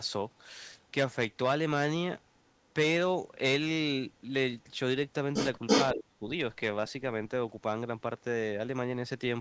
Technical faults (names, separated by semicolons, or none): echo leak; speech suppressed in double talk